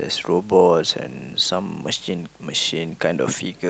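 Nothing in the signal of this short speech recording points to a technical fault: level, continuity and bandwidth hold steady throughout.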